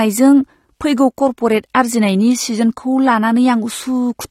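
Throughout, likely AAC compression at a low bitrate, consistent with about 32 kbps, discarded detail. Nothing remains above 15.9 kHz, leaving the speech plainly dull and smeared.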